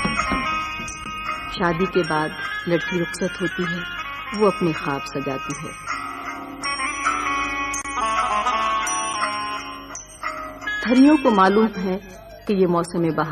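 From 6.87 s to 9.15 s, a drift correction step is heard. Speed rises about 5% and pitch climbs roughly 89 cents, close to a semitone. Then both snap back. Clock-matching software likely changed the playback rate in one jump to rebalance its buffer.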